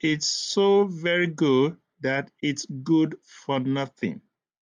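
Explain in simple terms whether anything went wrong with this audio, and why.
Nothing went wrong here: the speech comes through steady and intact, with no dropouts, glitches or other problems to point to anywhere in the recording.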